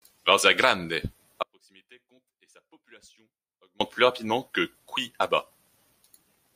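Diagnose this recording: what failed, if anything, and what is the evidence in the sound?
Audio dropout to a faint residue from 1.43 to 3.81 s, before "plus rapidement que": speech snaps to a faint residue about 35 dB down, likely a loose analogue connection.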